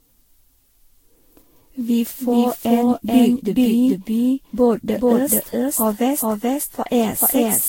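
From start to finish the speech carries a doubled audio track. A second full-band copy, about as loud as the original, trails it by roughly 0.4 s with no decay or room colour, so every syllable is followed by an identical repeat. This is likely a second capture through a slower path, or an edit holding two copies out of step. A waveform shows each burst repeated at that fixed offset, and a spectrogram shows every pattern duplicated as a shifted twin.

Generation loss also runs through the whole clip. The sound is swirly, smeared and hollow, and consonant attacks blur, more than a single encode at a rate near 64 kbit/s would explain. The likely cause is repeated Vorbis decoding and re-encoding, perhaps ten or so passes, with each pass quantising on a new frame grid so that noise and gaps accumulate. On a spectrogram, content stops dead at 16.6 kHz, and below that the image looks patchy, with flickering holes and speckle between harmonics.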